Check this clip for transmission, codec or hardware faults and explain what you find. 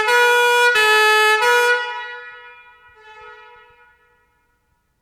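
There is one fault, a case of dropped samples at 0.62 s. Roughly a single sample is missing from the stream, so the waveform skips straight from one value to a later one and leaves a step discontinuity. A gap that short removes no audible sound. What you hear is one sharp, brief click. On a spectrogram it appears as a thin vertical line spanning the spectrum, and a zoomed waveform shows the abrupt jump. The likely cause is a sample lost in transfer.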